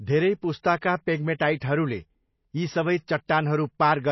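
From start to finish the speech sounds dull and watery. Nothing reaches above about 5.8 kHz, so the top end is missing, and the remaining detail has a plainly audible swirling, unstable texture. The likely cause is MP3 compression at a starved bitrate, consistent with roughly 24 kbps. Short of bits, the encoder cuts the treble at a fixed point and drops weaker frequency lines, which then flicker in and out from frame to frame.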